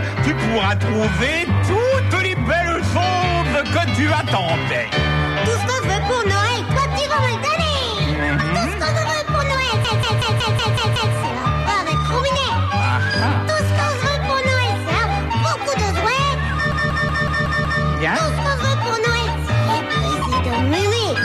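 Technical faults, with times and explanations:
9.85 to 11.15 s and 16.72 to 17.83 s, system hang loop: the system froze while the sound hardware kept replaying the same ring buffer, so one segment of about 186 ms repeats exactly, 7 times in the first event and 6 in the second. That repetition at 5.38 Hz produces a machine-gun stutter, and the loop length fits an 8192-sample buffer. When playback resumes, the audio carries on with essentially nothing skipped.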